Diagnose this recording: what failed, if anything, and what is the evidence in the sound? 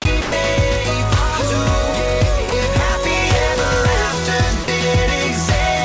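Three short stretches of the sound give way to a flat, steady hiss: 0.22 to 0.32 s, 2.50 to 2.52 s, and 4.64 to 4.68 s, lasting 100, 20 and 40 ms. The original sound returns right after each. This is likely sound dropped by the voice detector at the call-processing stage. The sender judged those moments to be background and stopped transmitting, and the receiver filled each gap with comfort noise. Nothing is heard above 8 kHz, which fits a G.722 call path at 64 kbps.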